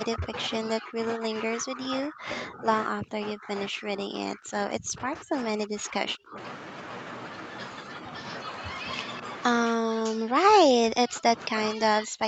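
Speech suppressed in double talk runs from 0.05 to 6.37 s. For about five seconds of that span the speech dips and breaks up, at worst around 35 dB down. This is likely an echo canceller hearing both sides at once. Unable to tell its own talker from the loudspeaker's echo, it turned everything down. A brief, shallow repeat follows at 7.83 to 8.05 s, lasting roughly 150 ms with only a few decibels of loss.

Echo leak appears at 9.13 to 9.22 s as a faint copy of the speech about 215 ms late, roughly 20 dB below the main signal. One side was likely on a loudspeaker. Its canceller failed to strip everything its microphone caught, so this scrap of the returned sound slipped back into the call.

Speech suppressed in double talk returns from 9.7 s to the end of the clip, this time deeper, with drops near 40 dB. The speech fades and fragments. This is likely the same canceller clamping down when both directions were active together, sacrificing the near talker along with the echo it was trying to remove.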